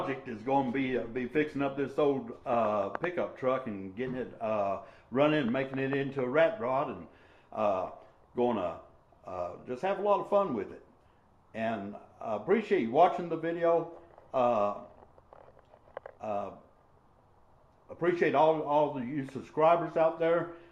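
From the start to 2.0 s the audio plays as an adaptive stream starting at a low bitrate. The treble is thin or synthetic-sounding and coding artefacts are prominent, which fits an Opus stream at around 24 kbit/s. The player chose this version to begin quickly, then moved to a better one once the connection was measured. At 2.0 s quality steps up abruptly, with no gap, to a level consistent with about 64 kbit/s.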